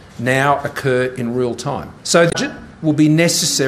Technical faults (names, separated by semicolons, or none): damaged data in a compressed stream